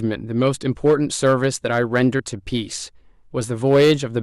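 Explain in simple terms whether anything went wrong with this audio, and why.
Yes, two things went wrong in this speech recording.

The first is hard clipping, from 0.86 to 2.07 s and again from 3.67 to 3.92 s. The speech was louder than the recording chain could hold, so the tops of the loudest waves were sliced off flat. That leaves a gritty, crackly edge on the strongest parts, and it is harsher in the second stretch, which was pushed further. Clipping follows the loudness of the speech, so it appears only on the peaks. That sets it apart from a steady background buzz or noise.

The second is compressed frames skipped, at 2.19 s. The audio was stored in small compressed blocks, and a couple of them never got played. The sound jumps ahead by roughly 40 ms, which fits two 20 ms blocks going missing. A gap in the recording would cause a clean click or a silent hole. Here the audio simply jumps ahead at the join, and nothing is actually silent.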